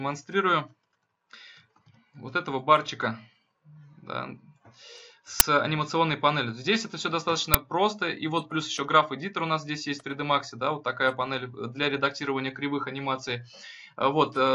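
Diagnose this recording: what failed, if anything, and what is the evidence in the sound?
Uninitialised buffer at 5.40 s and 7.54 s, a driver or buffer-stage failure: two abrupt, loud cracks, about 10 ms and 5 ms long. Blocks were sent to playback before audio was written into them, so stale memory contents played as samples.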